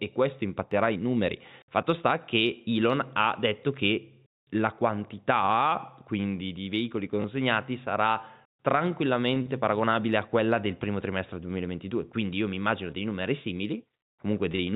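At 5.51 s, just before "quindi di veicoli", a single sharp click cuts through the speech, most likely from dropped samples. A fraction of a millisecond of the stream goes missing, so the waveform leaps straight to a later value. Nothing audible is lost, only that one instant snap, which shows as a thin vertical line on a spectrogram. Unlike a repeated packet, it has no length and no buzz.

From 7.22 to 7.24 s, after "quindi di veicoli" and before "sarà tranquillamente paragonabile a", comes packet loss with the last packet repeated. One 20 ms packet failed to arrive, and the receiver filled the gap by replaying the previous one. That single repeat sounds like a small blip. It is a brief blip with a duration of its own, not a point click. The G.711 mu-law telephone path carrying the call caps the sound at 4 kHz throughout.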